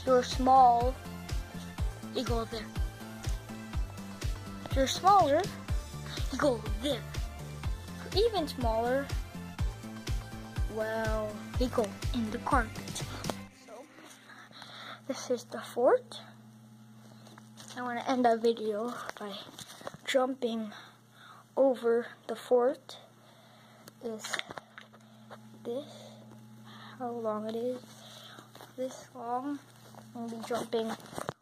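No technical faults can be heard at any point in the audio.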